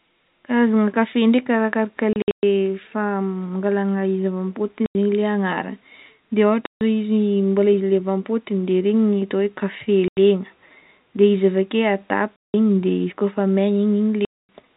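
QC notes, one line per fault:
2.13–14.49 s, packet loss filled with silence: six dropouts at 2.13–2.43 (just after "kafe ndraiky arakaraka", scattered, longest gap 120 ms), 4.86–4.95 (before "zegny le"), 6.66–6.81, 10.08–10.17, 12.37–12.54 and 14.25–14.49. The holes come in 30 ms steps, which fits 30 ms packets replaced by hard-edged silence in the narrowband G.711 telephone audio.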